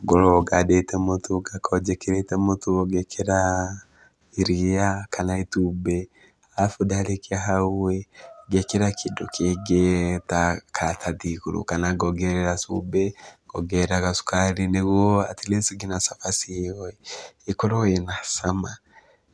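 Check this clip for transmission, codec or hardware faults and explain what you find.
Nothing to flag here: the speech comes through with no transmission, codec or hardware trouble to be heard anywhere along the way.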